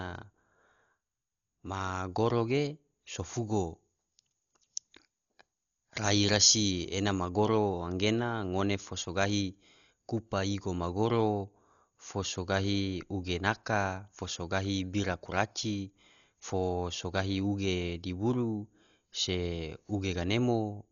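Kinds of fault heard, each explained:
Dolby Digital compression: The whole clip sounds dull and heavily coded, with nothing above 6.9 kHz. The encoder likely ran at a very low rate, near 40 kbps. Many frequency lines got no real bits and were filled with noise, leaving a rough, fluttery haze.
Pre-emphasis left on: From 3.34 to 7.29 s, after "ma goro ge so" and before "goro gena ngone fo", the treble jumps up. A recording boost was never undone. The curve fits FM 50 µs, about 10 dB higher at 10 kHz than at 1 kHz, so the speech turns thin and hissy.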